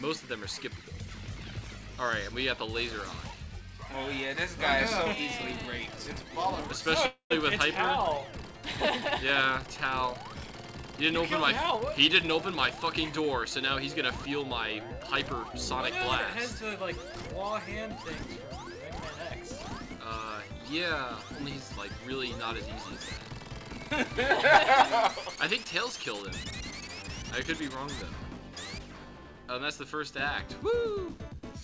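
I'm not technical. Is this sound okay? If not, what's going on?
No. Around 7.06 to 7.32 s the sound briefly turns into a fading buzz, then silence, and resumes where it stopped. This call audio freeze likely came from delayed network packets leaving the receiver with nothing to play.

From 11.63 to 13.67 s the sound runs about 12% faster at unchanged pitch and feels hurried. This jitter buffer speed-up trimmed roughly 0.3 seconds to catch up after the delay.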